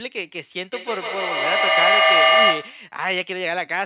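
A speech recording carries a feedback echo between two devices from 0.73 to 2.95 s: a second device in the room replays the call, its sound re-enters the first microphone, and that device's echo canceller cannot remove playback it did not produce. Each syllable returns roughly every 150 ms, thinner and ringing, and the loop is loud enough that repeats pile up to about 9 dB above the speech, all within a band ending at 4 kHz.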